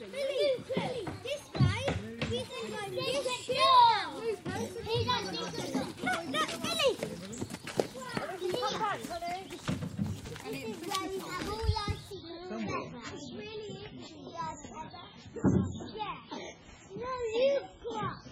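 At 12.11 s the audio switches abruptly to an adaptive stream at a lower bitrate and stays there to the end at 18.31 s. With no gap, everything above about 7.6 kHz vanishes and the sound turns smeary and swirly, which points to a step from roughly 128 kbit/s MP3 down to around 16 kbit/s. Unlike a dropout, playback never stops. Unlike a steady low-pass filter, the quality drop arrives suddenly mid-clip.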